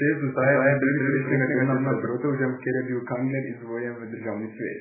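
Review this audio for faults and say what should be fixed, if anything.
The whole clip sounds watery and swirly, with nothing above 2.5 kHz, so sibilants lose their edge and onsets smear. That's likely heavy MP3 compression, consistent with a very low bitrate around 8 kbps, starving the encoder so it chops the top end. Encode at a much higher bitrate, or keep a lossless master.

From 0.45 to 2.07 s there's a doubled audio track: a second, full-band copy of the speech trails about a fifth of a second behind, at roughly the same level, with no reverb tail, then stops abruptly. It's likely a second capture path or an out-of-step edit leaving two copies layered. Check the routing and the edit so only one copy of the signal reaches the mix.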